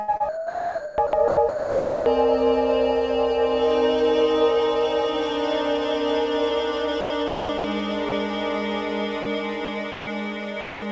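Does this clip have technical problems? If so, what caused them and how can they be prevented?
Yes. There is sound chopped by the voice detector from 0.17 to 2.06 s, 7.01 to 7.64 s and 9.65 to 10.07 s. Comfort noise replaces about 1.44 s, 0.36 s and 0.18 s of those stretches. The likely cause is the sender's voice activity detection toggling repeatedly on quiet material. On a spectrogram, real content alternates with smooth, featureless noise bands. The waveform shows envelopes broken into flat, low-level patches. Lowering the VAD's aggressiveness, or adding hangover time, prevents this.

Sound dropped by the voice detector occurs at 8.09 to 8.12 s, 9.23 to 9.26 s and 10.61 to 10.82 s. The sound gives way to steady low noise until transmission resumes. The likely cause is the detector classing faint sound as background and halting sending, so the receiver synthesised comfort noise. A spectrogram shows short gaps of uniform, structureless noise. 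The waveform shows the signal collapsing to a flat floor. Increasing detector sensitivity, or disabling discontinuous transmission, avoids it.

Across the clip, the spectrum stops at 8 kHz, which fits G.722 at 64 kbps.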